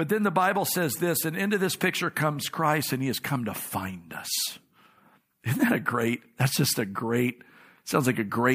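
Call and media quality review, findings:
Nothing stood out on listening to the speech in this call recording.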